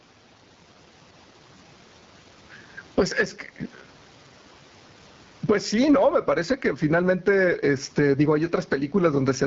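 Gain pumping runs throughout this speech recording: the gain ducks by roughly 15 dB under each loud syllable, likely from a mic gain set far too high with a fast limiter clamping every peak, squashing loud and soft parts together. The AMR wideband (HD Voice) codec is also present throughout, with plainly audible rough, raspy coding damage that fits one of its lowest modes, around 8.85 kbit/s. Nothing is heard above 7.5 kHz, and the faint room noise sits about 42 dB below the speech.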